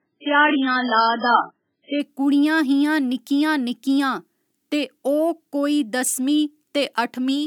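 For the first 2.0 seconds the speech sounds dull and watery, with nothing above 5.2 kHz and heavy codec artefacts, which fits an adaptive stream starting at a low bitrate of about 8 kbit/s. At 2.0 s the player steps up to a 128 kbit/s version and the treble returns abruptly, without a gap.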